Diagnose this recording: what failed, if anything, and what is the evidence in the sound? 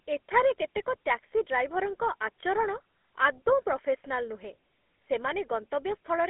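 Codec stage: GSM full-rate coding runs through the whole clip, giving the speech a buzzy, gravelly roughness and nothing above 3.8 kHz. A spectrogram shows a bare region above that line and coarse, smeared harmonics, because the excitation is rebuilt from sparse regular pulses, fitting a 13 kbps stream.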